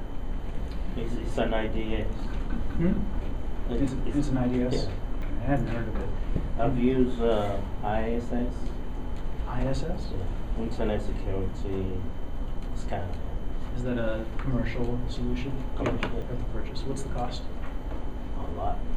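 Dropped buffers at 3.88, 5.22, 10.04 and 16.22 s, likely overruns where samples were overwritten before being read. Each jumps ahead without silence, skipping about 20, 70, 70 and 20 ms.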